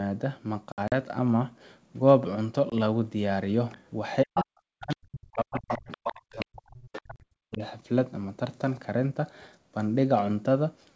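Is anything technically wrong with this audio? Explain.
Yes, the speech has three kinds of fault.

Packet loss on an ADPCM call: hard silent holes, then slightly distorted speech that settles shortly. They fall at 0.72–0.93 s (100 ms lost in scattered gaps, longest 60 ms), 2.70–2.72 s and 7.16–7.25 s (40 ms). Packets vanished, and the decoder's predictor and step size drifted from the sender's before resettling.

Other side's voice leaking through: second-voice fragments at 3.72–3.78, 4.35–4.44, 4.91–4.96, 5.55–6.45, 6.93–7.01 and 7.52–7.58 s, from about 30 dB below the speech up to about 5 dB below. This is likely loudspeaker echo the canceller missed.

Speech suppressed in double talk: the talker dips and cuts out in pieces, by up to about 40 dB, across 4.24–5.91 s and 6.32–7.62 s. The echo canceller, likely unable to separate talker from echo, attenuated both.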